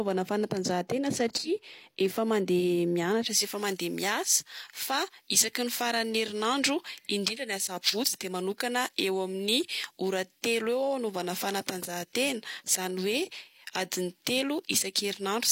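From 3.25 s to the end, the speech has pre-emphasis left on. A treble boost was applied before recording or transmission, and the matching de-emphasis cut never followed. Highs sit about 11 dB above the 1 kHz level at 10 kHz. The shape of the lift fits a J.17 curve. The voice turns thin and bright. Sibilants hiss and spit. The lower body of the sound seems to drop away.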